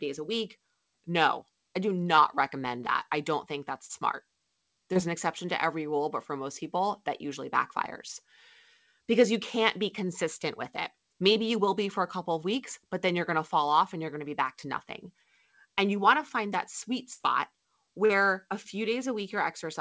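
Speech carried over a call path whose band stops at 8 kHz, consistent with a G.722 wideband codec, with short concealed packet loss at 2.16 s (between "I do" and "recommend that I don't"), 3.85, 4.93 (before "an exception to every"), 11.33 (after "be consistent with it") and 18.06 s. Each is a 13 to 40 ms smear or wobble where the decoder briefly extended the preceding sound and then blended back. A burst of packet loss at 17.13 to 17.22 s removes about 60 ms, long enough to be heard as a held, fading fill before the speech jumps ahead, unlike the brief blips elsewhere.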